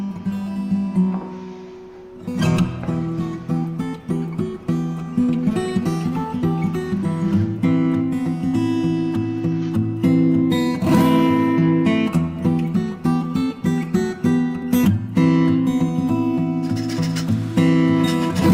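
At 14.85 to 14.88 s the sound jumps abruptly forward with a brief blip, likely a stream segment skipped, the player moving straight on after one segment failed to load.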